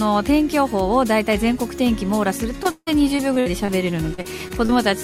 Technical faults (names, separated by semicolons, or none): repeated packet loss (robotic sound)